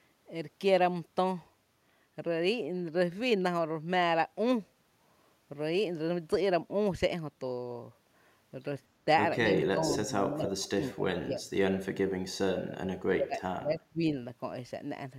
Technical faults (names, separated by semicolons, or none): speech suppressed in double talk; echo leak